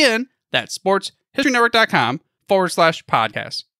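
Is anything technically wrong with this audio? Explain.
Yes. At 3.33 s the speech skips forward: audio is missing between chunks, with roughly 50 ms dropped and the two sides joined without any silence. The likely cause is a processor working in 1-second chunks losing a slice at each boundary. On a waveform or spectrogram this shows as an abrupt seam where the pattern jumps discontinuously rather than fading.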